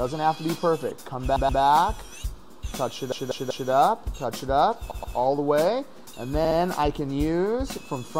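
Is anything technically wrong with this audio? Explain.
Yes. There are repeated frames at 1.36–1.62 s, 3.12–3.70 s, 4.91–5.17 s and 6.45–6.58 s. A short run of compressed frames got written out more than once, so the decoder replays the same slice of audio back to back. Each one is a stutter. The first three loop a 128, 192 and 128 ms chunk two, three and two extra times, and the last loops a 64 ms chunk twice, stretching the clip by about 1.2 s in total.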